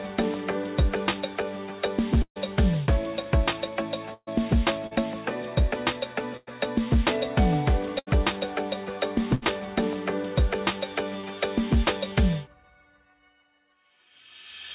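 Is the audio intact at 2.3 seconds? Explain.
No. At 2.3 seconds the clip is inside a burst of packet loss that runs from 2.22 to 2.38 s. Several packets in a row never arrived in time to be played. The receiver covered the hole by continuing the last sound and fading it, so a held buzz or hiss dies away to about 70 ms of silence. About 140 ms of audio is gone, and the sound resumes further on.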